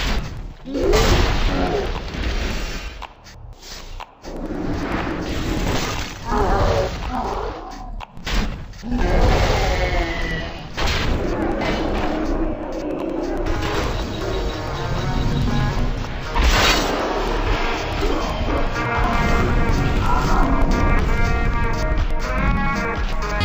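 From start to end, the audio suffers from interleaved audio read as planar. Each block stores left and right samples alternately, but the player treats the first half as left and the second half as right. Both halves then play at half speed, so everything drops an octave, 12 semitones. The pace still holds. Blocks last about 92.9 ms, which fits a 4096-sample block. The sound is doubled and choppy, stuttering about 10.8 times per second.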